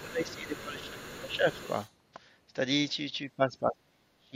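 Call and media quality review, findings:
Other side's voice leaking through, 0.0 to 1.91 s: echo canceller likely left residual loudspeaker signal in the mic path. Far-end voice audible under the talker, roughly 20 dB down, faint, over nearly two seconds.

Speech suppressed in double talk, 0.01 to 0.99 s: canceller likely misjudged simultaneous talk as echo and attenuated the near end. Talker's voice dips around 15 dB for about a second while the far end speaks.

Same fault, 1.18 to 1.47 s: suppressor likely engaging again during overlap, shorter and milder. Near-end level sags roughly 10 dB for about 0.3 s.

Same fault, 3.37 to 4.35 s: heaviest, likely suppressor gating, attenuation around 40 dB for about a second, so the talker effectively drops out to the end of the clip.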